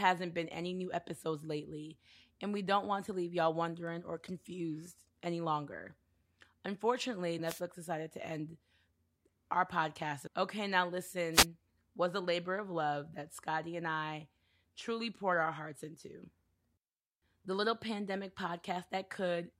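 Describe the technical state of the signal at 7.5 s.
A wireless microphone noise hit covers 7.45 to 7.61 s: the FM radio signal fades, receiver static swishes in, and the spectrogram shows a brief broadband smear before "decided to end".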